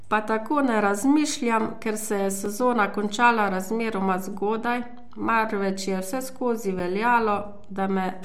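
Two brief ticks interrupt this speech clip, at 2.46 s, between "razmišljam ker se je" and "končala razmeroma zgodaj marveč", and again at 6.79 s. Each is a block of digital silence, about 3.5 ms and 7 ms long, where the sound drops abruptly to silence and returns without a fade. Beneath the whole recording sits a DC offset: the waveform is displaced from zero by a constant amount. It cannot be heard as such, but it uses up headroom and shows as steady energy at the very bottom of the spectrum.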